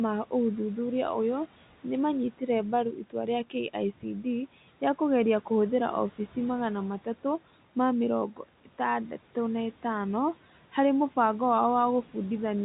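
From 2.32 to 2.49 s, just after "ma ũthuthuria ũyũ nĩ", the noise suppressor cuts part of the speech, pulling it down by about 12 dB for roughly a tenth of a second. It misjudges low-level speech energy as background and attenuates it, so the sound turns faint and swallowed. The same speech cut by the noise suppressor recurs from 2.92 to 3.15 s, dipping by about 11 dB over some 150 ms, against room noise sitting about 22 dB below.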